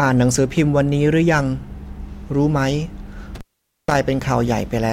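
Speech that drops out abruptly from 3.35 s to 3.95 s, with crackle at both edges and about 0.48 s of near-silence filled only by faint hiss. This is an intermittent contact: a loose cable or plug briefly lost connection, breaking the signal path until it reseated.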